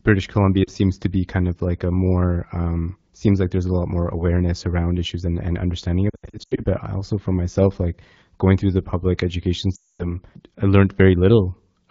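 From 0.64 to 0.70 s, 6.09 to 6.66 s and 9.75 to 10.15 s, lost AMR speech frames make the decoder replay its last pitch and vocal tract settings at falling gain. Speech smears and fades rather than clicking or cutting abruptly. The middle stretch comes in scattered bursts, and the last fades to silence.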